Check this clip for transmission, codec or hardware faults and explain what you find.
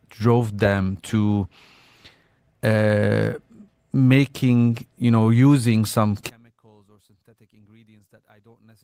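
Two faults turn up here. First, a call bitrate drop from 0.43 to 2.97 s: the encoder fell from 32 to 16 kbps, bottoming out for about 1.7 s, so the speech sounds coarser and watery. Then from 6.29 s to the end, right after "you know using some", the level falls by about 33 dB and the speech drops to a faint trace. The likely cause is one channel inverted, so the shared centre cancels when the stereo is folded to mono.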